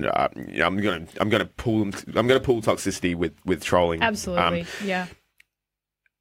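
After "uh you know I'm", from 0.76 to 2.89 s, crude rate conversion roughens the speech until "with with trolling". Samples are dropped or repeated, which fits a 48 kHz to 44.1 kHz change. The error sits roughly 30 dB down. It sounds like gritty, inharmonic fizz.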